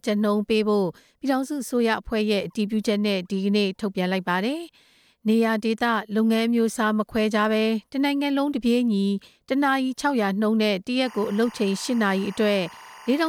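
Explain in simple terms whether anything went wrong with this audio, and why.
From 11.06 s to the end at 13.28 s, a steady, chirping warble sits quietly behind the speech, flickering between two high pitches around 1 kHz and 2 kHz. This is timecode bleed. Film and video sets use timecode, a buzzy timing signal that marks each frame, and here some of it has leaked in from a neighbouring track or cable. Its rhythm suggests timecode running at roughly 24 frames per second.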